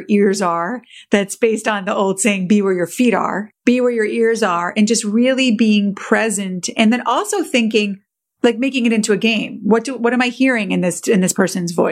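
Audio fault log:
Nothing to log here; the speech runs along without a single fault to point at.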